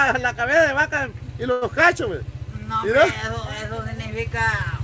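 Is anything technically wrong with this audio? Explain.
Yes, there is a short stall from a late packet at 1.52 to 1.71 s. The jitter buffer ran dry, so about 96 ms of the preceding sound was stretched until the packet arrived. Nothing is lost, but the sound hangs with a slight buzz or dip. On a spectrogram this appears as smeared horizontal bands, and on the waveform as a repetitive stretch. The G.722 call path shows nothing above 8 kHz.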